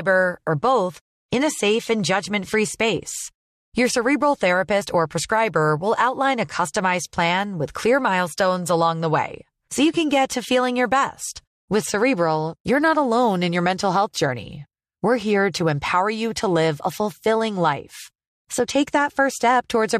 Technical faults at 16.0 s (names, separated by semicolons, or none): none